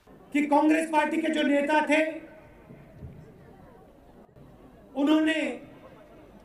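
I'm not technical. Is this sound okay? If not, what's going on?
No. There's a sudden gain jump at 4.25 seconds, lasting until about 4.36 seconds. For that short stretch the sound abruptly drops to a much quieter level, and the background noise drops right along with it, instead of easing down smoothly. That pattern is likely caused by a volume setting being changed instantly inside the recording or playback chain, with no gradual fade to soften the switch.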